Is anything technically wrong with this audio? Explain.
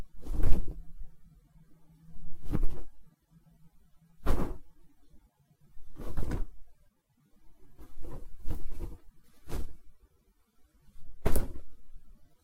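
No, nothing is technically wrong with this recording of sounds. It contains no technical fault to explain.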